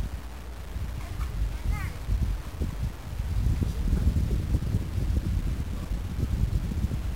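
Low bit depth without dither runs through the whole of this everyday-sound recording, giving it a grainy, gritty distortion that shifts with the sound itself. The likely cause is truncation to about 6 bits with no dither, so the rounding error tracks the signal instead of forming a steady hiss. The error sits only around 20 dB below the sound, and quiet passages either sputter between steps or collapse into silence.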